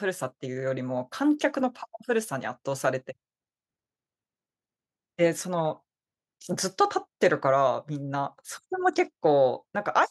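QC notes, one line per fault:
No fault found, so there are no QC notes to list.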